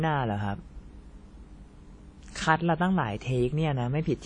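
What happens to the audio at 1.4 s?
At 1.4 s the speech carries the same damage heard across the whole clip, most likely WMA compression at a low rate, consistent with about 32 kbps. Long transform blocks smear quantisation noise, giving a ringing, washy hiss that swells with the speech, and nothing remains above 10 kHz. A plain low-pass filter would dull the top without that breathing noise.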